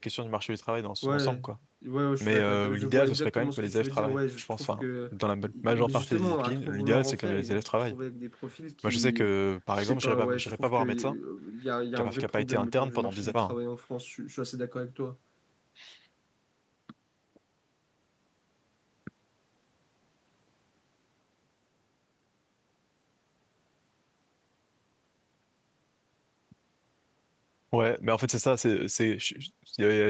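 No technical faults can be heard in this speech.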